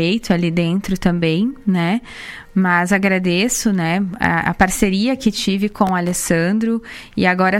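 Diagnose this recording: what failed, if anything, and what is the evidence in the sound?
A gritty burst of crackle tears through the sound from 5.69 to 6.16 s. This is processor overload crackle at the driver and buffer stage: around fifteen sub-millisecond buffers missed their deadlines over that stretch, each dropping out as a hard-edged gap of silence.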